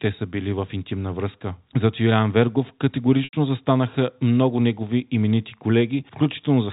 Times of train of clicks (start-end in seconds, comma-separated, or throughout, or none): none